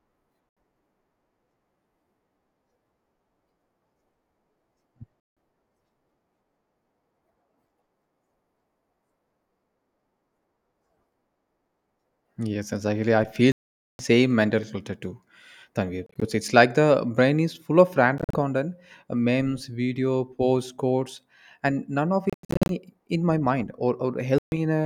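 Bluetooth dropouts at 0.49, 5.20, 13.52 (after "exactly I"), 16.06, 18.18, 22.30 (before "in my mind") and 24.38 s: the sound cuts to abrupt silence for about 76 to 470 ms, likely from lost wireless packets, then resumes further on.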